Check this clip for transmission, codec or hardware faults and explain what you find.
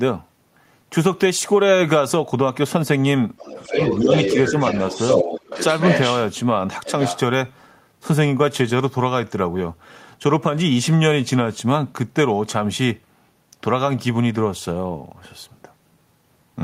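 Two related faults appear in this speech clip, both concentrated between about 3.4 and 7.2 seconds.

Other side's voice leaking through: from 3.38 to 6.22 s, and again from 6.85 to 7.19 s, a second voice is audible under the talker. In the first stretch it sits only around 5 dB below the main speech, and in the later burst it drops to around 10 dB below. The likely cause is residual echo: the far end's audio plays from the talker's loudspeaker, returns through the microphone, and the echo canceller fails to subtract all of it.

Speech suppressed in double talk: while that second voice overlaps, the talker's own level dips in short bites at 3.72 to 3.79 s, 4.01 to 4.08 s, 4.36 to 4.54 s and 5.19 to 5.45 s. The first and third dips are shallow, around 5 dB. The second is around 10 dB, and the last and deepest is around 15 dB. Each affects only about 70 to 100 ms in total. This fits an echo canceller that cannot separate near-end speech from loudspeaker echo when both sides talk at once, so it turns everything down together.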